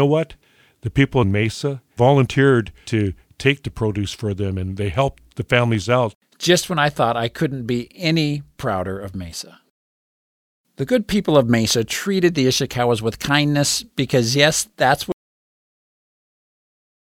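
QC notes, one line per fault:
15.12–17.09 s, cut-off end: right after "kindness because yes that's" the speech just stops dead at 15.12 s, mid-sound, and drops straight into digital silence until the end at 17.09 s. There's no tail or natural decay at all. That's what you get when the final chunk of audio never made it into the file, so the waveform ends abruptly where the writing stopped instead of where the speaker finished.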